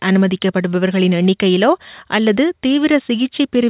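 No technical faults can be heard at any point in the recording. The audio has passed through a working call path whose codec, most likely G.711 mu-law at 64 kbps, leaves nothing above 4 kHz, which gives it a narrowband telephone character.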